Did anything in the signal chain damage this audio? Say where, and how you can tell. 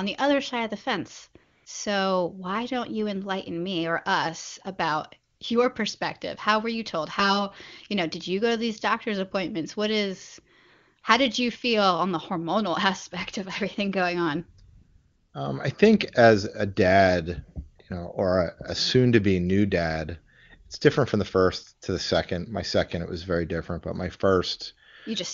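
Yes. AMR comfort noise appears at the codec stage at 1.43–1.65, 5.33–5.39, 11.01–11.03 and 14.75–15.33 s. Speech frames stopped, and steady synthetic noise briefly replaced the real background.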